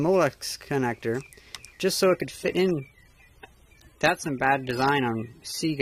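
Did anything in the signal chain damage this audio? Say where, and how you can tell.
Yes. The damage happens at the network stage, where an adaptive stream dropped to a lower bitrate. At 2.04 s the quality changes suddenly and stays degraded to the end, with no gap in the audio. Codec artefacts rise. The connection slowed and the player switched to a cheaper encoding. The sound fits a step down from about 96 to 32 kbit/s AAC.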